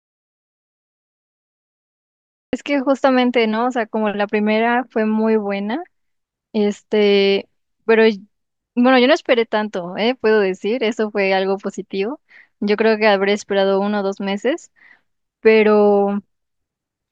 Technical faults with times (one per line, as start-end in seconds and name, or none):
0.00-2.53 audio dropout to silence